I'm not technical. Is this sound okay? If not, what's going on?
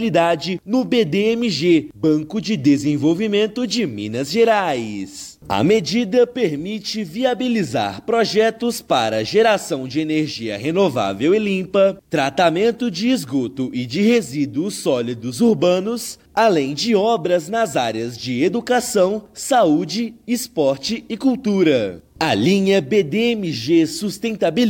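Yes, it's fine: nothing in it jumps out as a technical problem, so there's nothing here you need to worry about.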